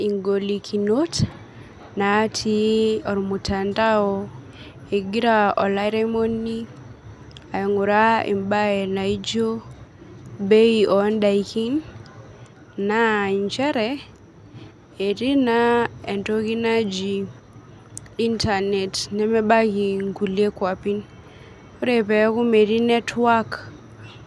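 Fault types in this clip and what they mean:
There are no fault types in this clip.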